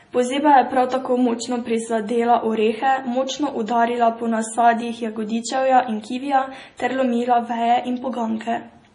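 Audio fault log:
Throughout, MP3 compression: the speech is heavily damaged, with nothing above 10.5 kHz and a watery, swirling texture, which is likely the work of an MP3 encoder starved of bits, fitting a low rate of about 32 kbps. With so little to spend, the encoder cut off the treble at a fixed frequency and discarded weak frequency lines that flicker on and off between frames, so sibilants turn metallic and chirpy and consonant onsets smear.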